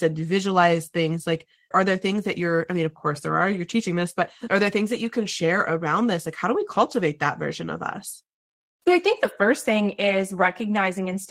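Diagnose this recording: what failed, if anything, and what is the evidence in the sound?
The network stage failed, and the decoder covered it with a lost packet rebuilt from error correction. From 6.79 to 7.01 s, between "how do we" and "that version of us", the speech turns rougher and noisier for about 120 ms, with no gap or dropout. That length fits six separate 20 ms packets going missing. Each following packet carried a low-bitrate copy of the lost one, and the decoder played those copies, trading gaps for coarser audio.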